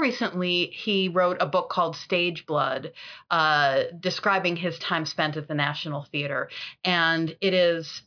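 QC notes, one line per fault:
Nothing to flag here; the speech comes through without any technical faults to report.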